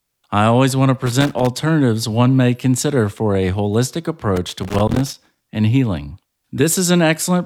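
Loose connector crackle breaks in after "I always want to" (1.06 to 1.47 s) and after "consider for a holistic" (4.36 to 5.45 s), ending before "and healing". A worn contact chops the signal irregularly, unlike evenly spaced digital clicks.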